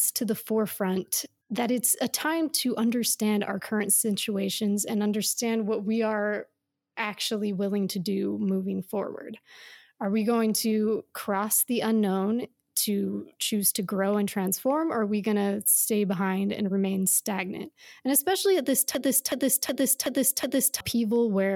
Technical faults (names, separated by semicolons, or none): system hang loop